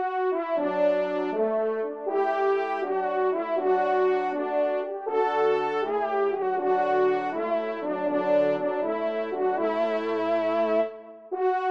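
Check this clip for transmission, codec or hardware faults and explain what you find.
No faults can be heard anywhere in this clip. There is nothing here that needs explaining.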